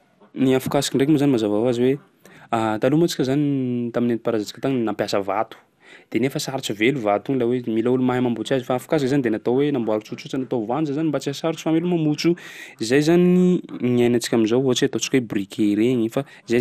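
MP2 compression runs throughout the speech, likely from a low-rate MPEG Layer II encoder, which fits something near 80 kbps. Starved sub-bands flicker or drop out, leaving nothing above 15.1 kHz, while the remaining bands are coarsely quantised, giving a dull, gurgling, granular roughness.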